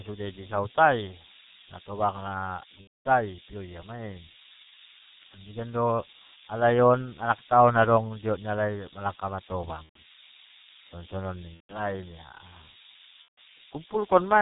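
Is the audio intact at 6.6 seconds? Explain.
No. At 6.6 seconds, as throughout the speech, a G.723.1 codec smears consonants into a muffled, hoarse sound, fitting about 6.3 kbit/s. The spectrogram is empty above 4 kHz, with blocky 30 ms frames. Low bit depth with noise shaping, pointing to about 4 bits, pushes rounding error upward as a steady hiss only about 10 dB below the signal, showing as a bright band across the top of the spectrogram.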